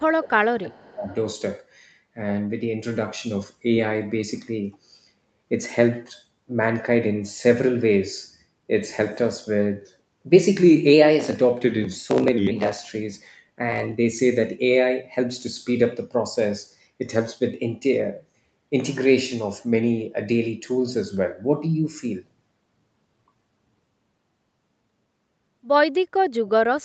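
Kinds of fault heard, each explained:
Echo leak: A faint copy of the speech, delayed about 350 ms, sounds from 0.05 to 0.17 s. It is likely echo the canceller failed to remove.
Speech suppressed in double talk: From 0.18 to 1.12 s the speech dips by roughly 20 dB. The canceller likely mistook overlapping talk for echo and turned it down.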